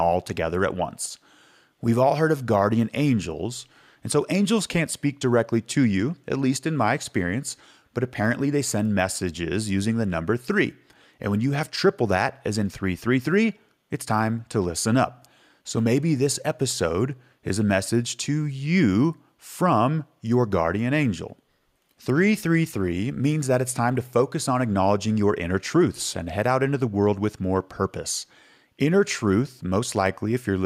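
No technical faults can be heard anywhere in the speech recording, and the signal stays continuous and steady throughout.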